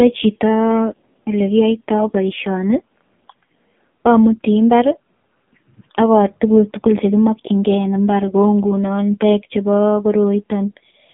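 Across the whole clip the speech sounds buzzy, thin and synthetic, with nothing above about 3.7 kHz and a narrow 150 Hz to 3.5 kHz telephone band. This is AMR narrowband mobile codec damage, heavy enough to suggest a low rate near 5.9 kbps.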